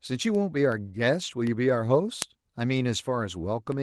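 Word clock ticks begin at 0.35 s and continue to the end of this speech clip, recurring roughly every 0.4 s. The receiving device is running on its own clock instead of locking to the sender's, with a mismatch of around 100 ppm. Each time the two clocks slip a full sample apart, a single sample is dropped or repeated and the neighbouring samples are misread. The result is a steady train of sharp ticks of uneven strength.

A lost packet rebuilt from error correction occupies 1.23 to 1.29 s. About 40 ms of audio went missing in transit, which fits two 20 ms Opus packets. Rather than leaving a gap, the decoder played the low-bitrate copies carried in the following packets. That stretch sounds rougher and noisier than its surroundings. The call is already limited to a 12 kHz bandwidth, so there is no full-band top end to dip.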